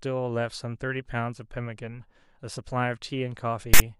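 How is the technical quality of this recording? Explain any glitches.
The recording has one clear glitch near the very end. From 3.74 to 3.80 s, a block of file tags played as audio: the player read a stretch of embedded text metadata as if it were sample data, so the character bytes were turned straight into waveform values. Because text bytes sit in a narrow, mostly positive range, the result is a loud, harsh rasp offset to one side, a burst of static lasting about 64 ms with abrupt, hard edges.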